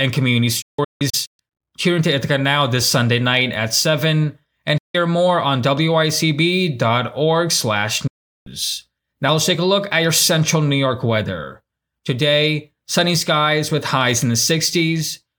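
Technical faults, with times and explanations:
0.62–1.40 s, 4.78–4.95 s, 8.07–8.47 s: digital broadcast dropout. The receiver mutes on corrupt frames with roughly 8 ms fades, so audio simply vanishes. The first is scattered holes (longest 160 ms), the others solid 160 and 384 ms gaps. Waveforms show flat silence, spectrograms blank vertical bands.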